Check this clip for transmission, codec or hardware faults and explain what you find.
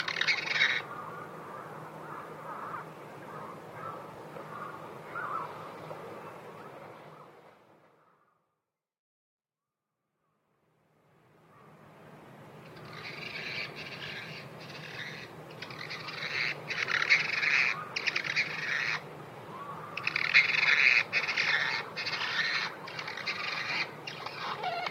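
One codec fault turns up in this recording of everyday sounds: damaged data in a compressed stream at 4.14 s. At this point part of the encoded stream was corrupted. Bytes were lost, zeroed, overwritten or mixed with unrelated data. The decoder misreads or refuses the affected frame, loses synchronisation and hunts for the next valid frame header before playback resumes. The result is a brief disturbance lasting under 20 ms, which may come across as a chirp, squawk, click or momentary gap.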